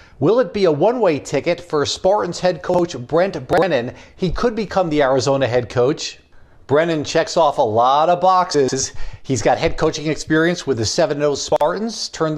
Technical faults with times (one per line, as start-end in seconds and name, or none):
2.69-2.79 chunks out of order
3.53-3.62 chunks out of order
8.54-8.73 chunks out of order
11.52-11.61 chunks out of order